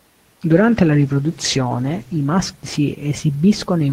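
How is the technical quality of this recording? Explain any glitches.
The recording has one clear problem: a call bitrate drop running from about 0.54 s to 3.51 s. The connection's bandwidth estimate fell and the encoder was pushed onto far fewer bits. From the sound, that's a fall from somewhere near 32 kbps to around 12 kbps, bottoming out for roughly 1.4 s. With that little data the speech gets coded coarsely and the top end is cut, so it turns muffled and watery until the rate comes back up.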